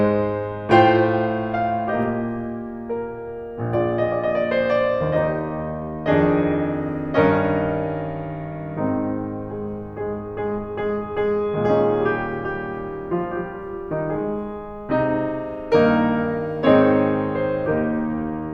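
No technical faults are audible.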